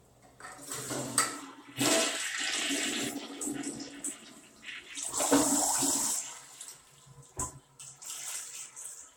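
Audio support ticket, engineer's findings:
Generation loss, throughout the clip. Swirly, smeared, hollow texture. Transients blurred, attacks soft. Spectrum empty above 19.3 kHz. Damage heavier than a single lossy pass would leave. Probable component: transcode chain. The artefacts point to MP3 at around 96 kbit/s, likely re-encoded about four times. Each decode and re-encode requantises on a shifted frame grid. Noise and spectral holes accumulate.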